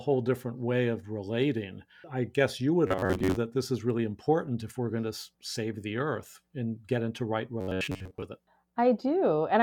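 Right after "I guess you would", from 2.87 to 3.37 s, and again after "and get into right", from 7.61 to 8.25 s, the speech goes to robotic sound from repeated short buffers. It's a stiff metallic buzz at 93.8 Hz, likely from replaying a roughly 10.7 ms chunk for most of each stretch.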